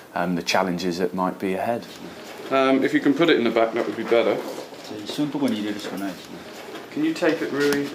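A single sharp tick cuts through the audio at 2.38 s, a bright, full-band click that has nothing to do with the surrounding sound and vanishes as quickly as it arrives. It is a bit error spike: one sample has had a single bit flipped, in memory or on a digital link, so its value jumps by a power of two, peaking at about -20 dBFS, before the very next sample returns to normal.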